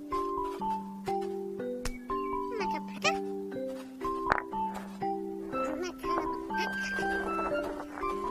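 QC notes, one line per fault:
0.56–0.61 s, 2.94–2.98 s, 6.31–6.35 s: damaged data in the compressed stream, three short glitches of about 40 ms each. Bad bytes knock the decoder off its frames, so it garbles or drops them and hunts for the next header before playback steadies.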